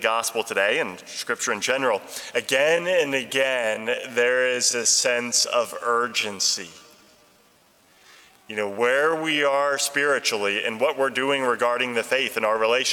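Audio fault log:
2.59 to 9.77 s, time-stretched section: the pace abruptly slows to 0.655 times normal while the pitch stays unchanged, so the sound drags through this span. The likely cause is software lengthening the passage to fit a set duration by repeating short pieces.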